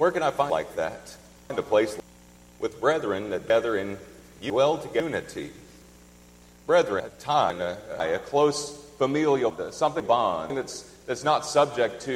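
The audio has chunks out of order in four places: 0.5 to 2.0 s, 3.5 to 5.0 s, 7.0 to 8.0 s and 9.5 to 10.5 s. Each has a jumbled moment. The audio moves in half-second chunks. In each spot one chunk plays late, after the ones that should follow it. In the first two it lands two chunks late, in the last two one chunk late. Nothing is missing. Each reordering leaves three hard joins.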